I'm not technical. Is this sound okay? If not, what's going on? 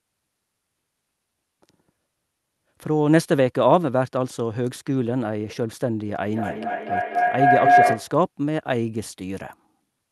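No. From 6.28 to 8.19 seconds there is a feedback howl: two devices in the same room fed each other's sound back, growing louder each round, with each round taking about a fifth of a second. It becomes a tone of roughly 700 hertz that gets louder than the speech.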